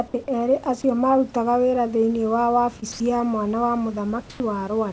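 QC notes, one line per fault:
2.80–2.84 s, short concealed packet loss: a brief smear lasting about 20 ms, where the sound briefly wobbles instead of moving on cleanly. That stretch of the call arrived too late, or not at all, for the decoder. The receiver covered the 20 ms gap by extending the preceding sound, then blended back into the real signal. The short patch makes it heard as a smear, not a gap. As elsewhere in the clip, nothing above 8 kHz is present, which fits a wideband call codec.
2.92–3.00 s, sound dropped by the voice detector: for about 80 ms the speech gives way to a steady, featureless noise, then returns. Roughly 70 ms of real sound is missing. The likely cause is that the sender's voice detector took this stretch of sound for background and stopped transmitting. The receiver then played comfort noise until the detector triggered again, so the speech is swapped for a noise bed.
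4.30–4.40 s, comfort noise in place of the background: for about 100 ms the room background is replaced by a smooth, static hiss about 7 dB quieter. The real background sits only about 22 dB below the loudest speech. This is likely discontinuous transmission: with no speech detected, the sender paused, and the receiver synthesised noise roughly shaped like the room.
4.38–4.40 s, onset clipped by the voice detector: the sound that returns after the noise-filled pause starts abruptly, with its soft beginning missing. About the first 20 ms were never sent. The likely cause is a voice detector that was slow to notice the sound had resumed. Comfort noise filled those first moments, so the sound seems to begin mid-attack instead of building up naturally.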